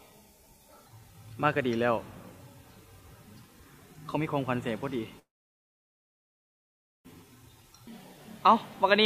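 At 5.19 s the audio stalls, its last sound carrying on and fading away, until 7.08 s. For almost all of that gap, about 1.8 s, there is nothing at all. When it resumes, it picks up exactly where it left off, with nothing lost. This is a call audio freeze, likely caused by packets stalling in transit until the jitter buffer ran dry. The receiver held playback rather than skipping ahead, which inserted roughly 1.85 s of extra delay into the stream.

From 7.23 s to 7.58 s the sound runs noticeably quicker, about 111% of normal speed, yet its pitch stays where it was, so it comes across as rushed rather than squeaky. This is a jitter buffer speed-up. The stalled packets likely arrived in a burst after the freeze, leaving the buffer overfull. The receiver clawed back the excess by cutting out tiny pitch-period-sized slices, around 50 ms in total.

Right after, from 7.63 s to 8.15 s, the audio drags to about 92% speed, again at unchanged pitch, with sounds stretched slightly longer than they should be. 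This is a jitter buffer slow-down, with the buffer running low or its target delay just raised. Having trimmed the buffer, it rebuilt a safety margin by repeating single pitch periods and small bits of quiet, adding back about 50 ms.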